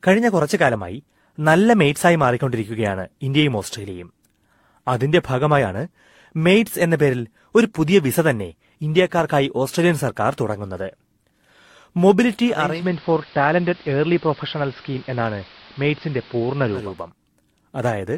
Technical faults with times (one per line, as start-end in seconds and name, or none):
12.47-17.12 digital radio blending to analogue